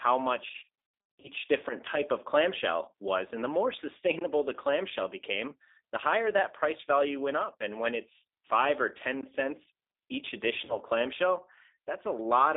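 Throughout, the speech sounds thin, slightly rough and synthetic, confined to roughly 300 Hz to 3.7 kHz. This is G.729 codec damage: the voice is rebuilt from a vocal tract filter, a pitch predictor and a few pulses per frame, which fits an 8 kbit/s G.729A stream.

From 0.48 to 1.30 s, just before "different type of clamshell", the voice repeatedly smears into fading buzzy tones or coloured noise. This is VoIP packet loss concealed by the speech codec. About 420 ms of audio is missing across a 760 ms stretch, in gaps of up to 80 ms. The decoder fills each gap by extending its last pitch and filter. A shorter 40 ms dropout at 10.65 to 10.78 s, right after "cents each", gives a brief blur.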